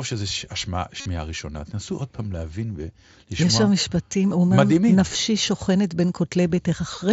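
A buzzy, held tone with a slight warble on recovery fills 1.00 to 1.06 s, with a briefer glitch at 2.17 s and nearly hidden glitches scattered across 5.09 to 5.15 s and at 6.56 s. This is concealed Bluetooth headset packet loss: lost headset frames were patched by repeating recent matching waveform, audible here within the wideband mSBC headset codec's 8 kHz band.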